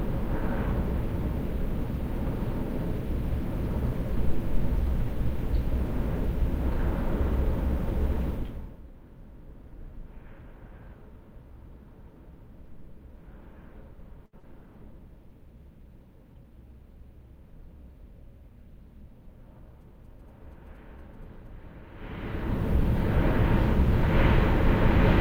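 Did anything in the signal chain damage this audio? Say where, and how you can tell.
Yes. At the network and jitter-buffer stage there is a short stall from a late packet, 14.25 to 14.35 s. The sound is held for about 78 ms and then resumes where it stopped, so nothing is lost; the delay simply grows by 78 ms. That distinguishes it from true loss.

Just after, 14.39 to 14.45 s, comes a short concealed packet loss, also in the network path. About 40 ms of audio never arrived, and the decoder filled the gap by extending the previous sound before blending back in. It is heard as a brief smear, and unlike the stall, audio is actually missing.

From 19.81 to 21.47 s, GSM signalling bursts enter through the analogue wiring. A nearby 2G phone's radio bursts are rectified into a galloping pattern of short 217 Hz buzzes, about 25 dB below the signal. That fixed 217 Hz rhythm separates it from mains hum or digital dropouts.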